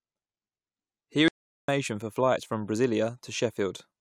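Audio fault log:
1.28–1.68 s, audio dropout to silence: the speech cuts off mid-flow and about 0.4 s of silence follows, with no room tone, before it resumes on "for flights from". The input was likely lost briefly while recording continued writing silence, so that stretch is gone.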